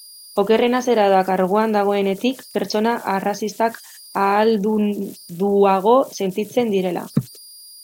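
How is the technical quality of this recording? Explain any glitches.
The recording has one technical fault, and it runs through the whole clip: converter idle tones. With no dither, the delta-sigma converter settles into repeating bit patterns whenever the speech level is low, and those patterns produce a tone around 5 kHz, about 27 dB below the speech. It sounds like a whistle in the pauses and a gritty texture under quiet syllables. A spectrogram would show a thin horizontal line near 5 kHz across the gaps between phrases.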